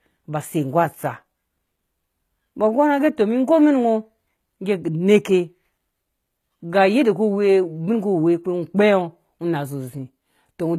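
A speech clip with plainly audible HE-AAC compression damage throughout. S sounds come out gritty and metallic, likely from spectral band replication rebuilding the treble at a low bitrate that fits about 20 kbps. A spectrogram shows blocky, copied-looking upper bands ending sharply at 14.9 kHz.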